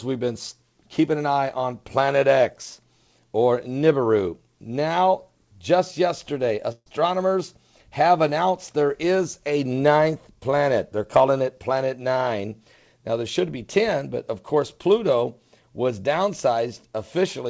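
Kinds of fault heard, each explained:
Burst of packet loss: about 140 ms goes missing at 6.72–6.88 s, bridged by a fading continuation, then brief silence, unlike a clean mute that simply drops out.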